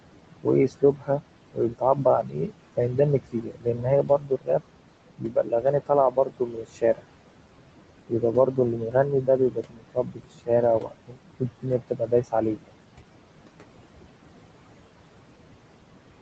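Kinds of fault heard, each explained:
Noise suppressor artifacts: The suppressor is treating the room noise, which sits about 14 dB under the speech, as steady noise and pulling it down by about 18 dB frame by frame. You can hear the background sink in the gaps and climb back up whenever the talker comes in.
Speech cut by the noise suppressor: In places the suppressor mistakes parts of the speech for noise and ducks them along with the background, by about 15 to 19 dB at the deepest. It happens at 0.43–1.21 s, 1.53–2.78 s, 3.32–4.61 s, 5.18–7.02 s, 8.09–10.49 s and 10.8–12.74 s. Within each stretch only bits are hit, from a few hundred milliseconds up to around a second in total, so endings and softer sounds come out faint or swallowed.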